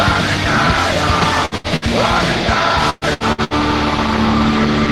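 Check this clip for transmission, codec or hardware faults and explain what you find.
Two kinds of packet-loss fault are present.

Bursts of packet loss at 1.45–1.54, 1.57–1.67 and 1.76–1.85 s: each drops about 60 ms, bridged by a fading continuation of the preceding sound before the audio resumes.

Repeated packet loss (robotic sound) from 2.90 to 3.54 s: four gaps, the longest 118 ms, concealed for roughly half the span, giving choppy sound with about 300 ms missing.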